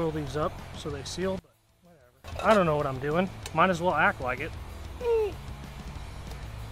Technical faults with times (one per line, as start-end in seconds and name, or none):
1.39-2.24 one channel inverted